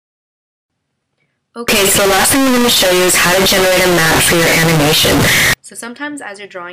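From 1.68 s to 5.54 s the audio jumps to a very loud, harsh, buzzy level, with background noise as loud as the main sound, though pitch stays traceable. The likely cause is float read as integer: 32-bit float samples interpreted as 32-bit integers. The waveform turns into a near-square block at an almost fixed, high level, and the spectrogram fills with dense broadband energy across that span.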